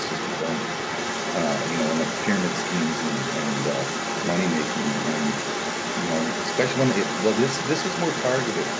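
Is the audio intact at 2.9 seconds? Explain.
No. Throughout the clip, from 0.0 to 8.79 s, the echo canceller likely failed to remove the far end's loudspeaker playback from the microphone, so the other side's voice leaking through sits under the main speech at 2.9 s, only slightly quieter than it.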